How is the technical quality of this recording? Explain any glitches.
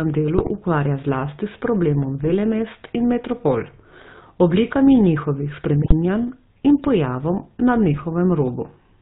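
The recording has poor technical quality. It has been through a narrowband mobile codec, and four short bursts of corruption break the speech.

The GSM full-rate codec colours the whole clip. It models the vocal tract and excites it with a sparse pulse train, so fine detail in the excitation is lost. The roughness and texture fit the 13 kbps full-rate coder. Nothing above 4 kHz gets through. The speech sounds buzzy and gravelly, and the codec damage is plainly audible.

GSM bit errors hit at 0.37 to 0.51 s, 2.23 to 2.35 s, 5.82 to 5.94 s and 7.93 to 8.05 s. Each burst lasts about a tenth of a second. Flipped bits corrupt the decoder's filter, pitch and gain values. The spectrum bends, and the level jumps across five to seven frames. The speech breaks into squawks, pops and gargling. The damage fits an error rate of roughly 2 percent.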